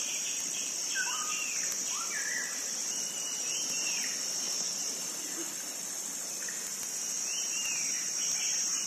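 A receiving device running on its own clock, not locked to the sender's digital link, drifts by roughly 150 parts per million. This causes word clock ticks: about fifty sharp, uneven clicks, one slipped sample each, roughly every 0.15 s from 0.24 s to 8.81 s.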